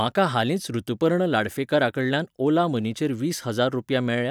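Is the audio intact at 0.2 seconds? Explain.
Yes, at 0.2 seconds the audio is intact, with no dropout, click, distortion or other fault audible at that moment.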